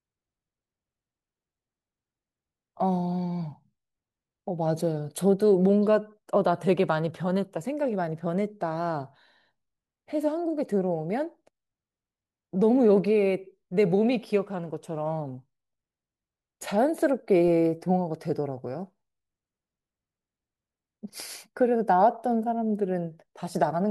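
At 17.48 s the zero line of the signal shifts abruptly: a DC step of about -35 dBFS enters the path, the kind of offset jump a converter recalibration or a switched-in input with an offset would produce. A 20 Hz high-pass then bleeds the offset away, so it decays rather than holding. The sudden shift is heard as a single low thump or click under the speech, while the speech itself carries on unchanged.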